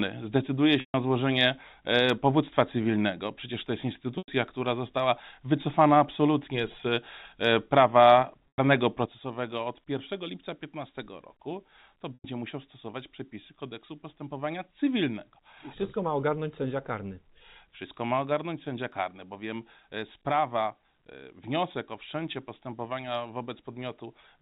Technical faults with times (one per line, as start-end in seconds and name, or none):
0.80-0.94 packet loss with pitch repetition
4.18-4.28 packet loss with pitch repetition
8.48-8.58 packet loss with pitch repetition
9.06-24.41 sudden gain jump
12.14-12.24 packet loss with pitch repetition